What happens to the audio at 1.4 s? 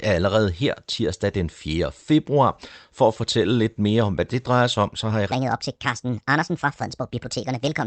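Nothing goes wrong at 1.4 s; the speech passes through intact, with only the band-limited character of the call path.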